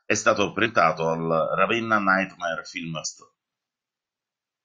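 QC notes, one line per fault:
0.65 s and 3.04 s, damaged data in a compressed stream: corrupted bytes in the encoded speech make the decoder misread those frames, lose sync and hunt for the next valid frame header. Each spot comes out as a brief chirp or blip lasting under 20 ms.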